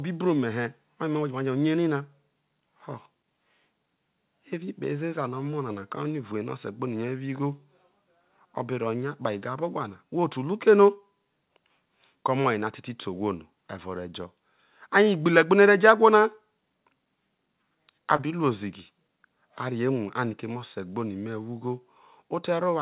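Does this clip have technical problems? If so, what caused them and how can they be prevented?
Yes. At 18.16 to 18.20 s the speech briefly smears into a short wobble before it settles back, the mark of a short concealed packet loss. About 20 ms of audio arrived too late for the decoder, so the receiver improvised roughly 24 ms by extending the preceding sound and then crossfaded back into the real signal. The call's G.711 mu-law path stops at 4 kHz, so the patch is narrowband like the rest. A steadier network or a slightly deeper jitter buffer would prevent it.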